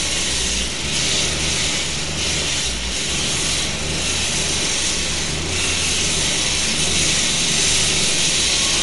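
A recording of everyday sounds, and throughout it the treble stops dead at about 11.3 kHz while the remaining detail has a watery, swirling quality, with smeared attacks, which points to likely MP3 compression at a low bitrate, around 48 kbps. Starved of bits, the encoder drops the top band and lets weak frequency lines flicker on and off between frames. A spectrogram would show a hard ceiling at 11.3 kHz and speckled, patchy energy below it.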